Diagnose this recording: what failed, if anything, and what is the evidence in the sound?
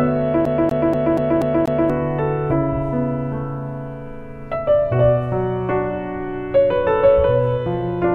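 From 0.45 to 1.90 s the playback stage fails as a CD stuck on one turn. A 240 ms slice repeats six times, each restart marked by a brief mute. On the waveform, identical blocks tile with gaps between them. On the spectrogram, the same pattern stamps at an even rhythm, as a scratch keeps throwing the laser back a track.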